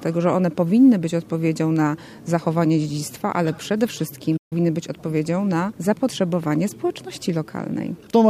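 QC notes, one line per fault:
4.37–4.53 s, playback stall: sound halts mid-flow for 140 ms, unlike a dropout, likely from the player starving for data.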